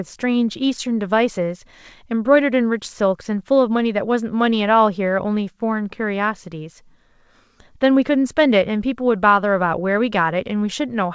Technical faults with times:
none

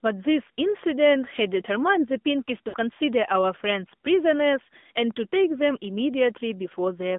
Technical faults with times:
0.00-7.19 AMR narrowband mobile codec
2.68-2.76 lost AMR speech frames

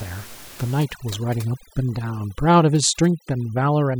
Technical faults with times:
0.83-3.99 overdone noise removal

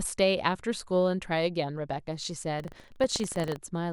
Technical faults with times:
2.56-3.57 buffer tearing

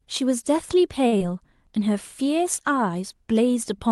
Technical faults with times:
1.07-1.14 short stall from a late packet
1.18-1.22 short concealed packet loss

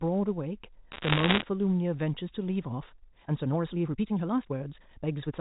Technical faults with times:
0.92-1.42 bit errors on a digital phone line
2.74-5.41 time-stretched section

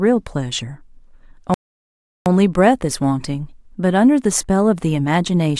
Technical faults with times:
1.54-2.26 playback stall

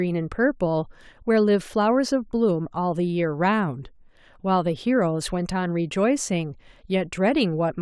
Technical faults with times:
none

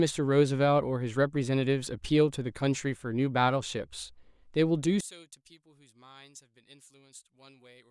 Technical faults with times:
5.01-7.91 one channel inverted

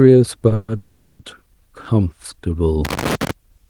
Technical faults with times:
0.54-1.21 call audio freeze
2.85-3.31 loose connector crackle

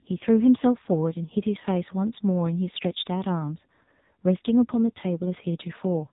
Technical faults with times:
0.00-6.12 AMR narrowband mobile codec

